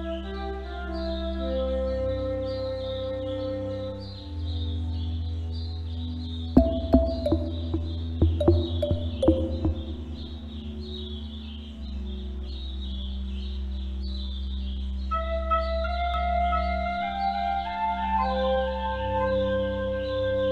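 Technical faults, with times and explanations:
16.14 s to the end: doubled audio track. A slower second capture path or an out-of-step edit likely mixes the audio in twice, so a full-band copy about 5 dB quieter trails by roughly one second, starting abruptly, with no decay or room colour.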